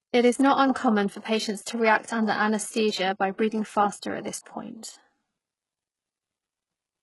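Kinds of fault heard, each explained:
HE-AAC compression: The speech is heavily damaged throughout, and the likely cause is HE-AAC coding. This codec spends its few bits on the lower spectrum. It then fakes the treble by copying lower bands upward under a rough envelope. Here the top end sounds artificial, with nothing above 11.5 kHz. Sibilants come out gritty and metallic. The heaviness of the damage fits a very low bitrate, around 12 kbps.
pre-echo: At 4.43 to 4.46 s, a brief hiss arrives just before a sharp attack. It spreads over about 31 ms. A transform codec shares its quantisation noise across a whole block. When a loud onset sits late in the block, noise sized for that loud part spills into the quiet moment before it. The attack sounds softened and smeared as a result.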